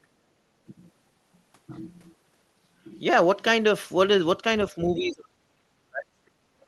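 The speech falls away from 4.71 to 6.12 s and 6.31 to 6.38 s, likely speech suppressed in double talk as echo control ducked it: the waveform shrinks and the spectrogram darkens.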